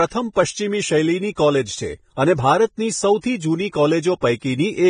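Heavy lossy coding, likely Vorbis compression, runs through the whole speech clip. The cut-off is lowered so that nothing remains above 9.7 kHz and the treble is quantised coarsely, which fits a low bitrate of roughly 22 kbps. The result is hissy, grainy speech with roughened tones.

At 4.21 s, pre-echo appears. A sharp onset sits late in a transform block, so quantisation noise sized for the loud attack spills about 17 ms ahead of it. You hear a brief hiss leading in and a softened, smeared attack.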